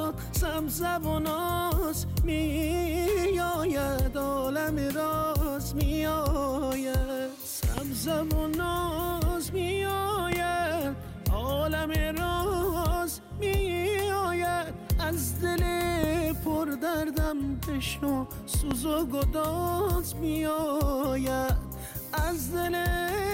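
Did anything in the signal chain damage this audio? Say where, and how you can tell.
Yes: four loud pops at 7.78–7.80, 10.32–10.35, 16.04–16.06 and 18.71–18.74 s, roughly 15 dB over the sound, which carries on underneath. Likely voltage spikes from a flaky analogue connection.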